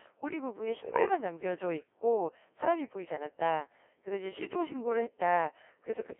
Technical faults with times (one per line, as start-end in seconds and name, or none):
0.00-6.20 Codec 2 vocoder